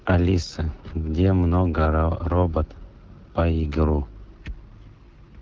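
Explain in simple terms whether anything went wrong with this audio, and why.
The speech runs through an AMR wideband (HD Voice) codec for the whole clip. It was set near its lowest quality. The codec rebuilds the voice from a simple model of the throat and mouth. At this setting, the speech comes out rough and raspy throughout.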